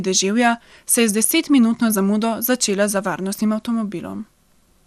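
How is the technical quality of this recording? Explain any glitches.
The recording has one fault that runs through the whole clip: compression damage, plainly audible, most likely from MP2 coding.

MP2 compression, throughout: MPEG Layer II divides the spectrum into 32 equal sub-bands and shares a fixed bit budget among them. With too few bits, the highest bands are dropped and the remaining ones are quantised coarsely. Here nothing is present above 15.2 kHz, which fits a low bitrate around 80 kbps. The speech sounds dulled, with a granular, gurgling roughness.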